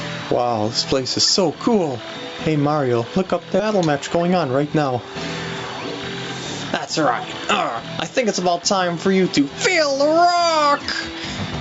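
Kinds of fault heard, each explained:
gain pumping: Throughout the clip the level breathes, with the background swelling up in the gaps and then ducking by about 15 dB under each loud sound, so loud and soft parts sit squashed close together. The likely cause is input gain set far too high, with a fast limiter or compressor clamping down on every peak. On a waveform the peaks are flattened to a near-uniform height while the noise floor rises between them; a spectrogram shows the background haze brightening in pauses and darkening under loud events.
skip ahead: At 3.6 s playback jumps forward, dropping roughly 0.7 s of audio and joining the two sides directly with no filler or silence. This is what happens when a stretch is discarded while later audio is already queued, here cutting the built-up delay by a similar amount. On a waveform it appears as an abrupt splice where the envelope changes shape instantly; on a spectrogram there is a sharp vertical seam where one pattern gives way to an unrelated one.
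jitter buffer speed-up: From 3.69 to 4.92 s the sound runs at about 108% speed while keeping its pitch, so it comes across as hurried. The receiver was holding more audio than it wanted and trimmed roughly 100 ms in total by repeatedly cutting out short pieces one or a few pitch periods long. On a spectrogram the harmonics stay at the same height but events are squeezed closer together in time; on a waveform the removals show as many tiny, near-seamless splices.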